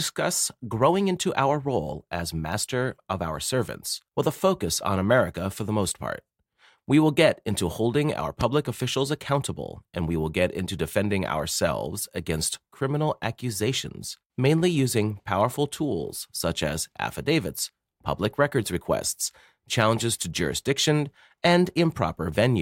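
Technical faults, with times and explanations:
8.41–8.43 s, loud pop: a single sharp pop sits on top of the speech between "get into holding our" and "officials accountable and we", peaking roughly 15 dB above the surrounding signal and lasting only a couple of hundredths of a second. The speech continues underneath without a break. The abrupt transient, briefly shaped by the downstream circuitry, is likely from a sudden voltage step such as a plug, switch, static discharge or driver glitch.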